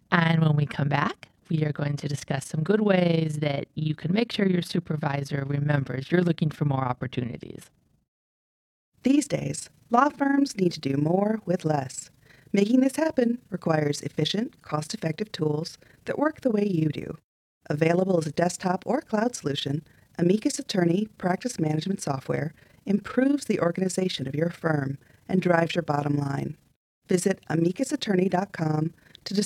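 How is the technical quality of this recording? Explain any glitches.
The recording has a clear technical fault running through the whole clip: overlap-add ripple. The speech was split into windowed frames and rejoined with overlaps whose gains don't sum evenly, so the level dips by about 11 dB once per frame, around 30 times a second, giving a rough, fast flutter throughout.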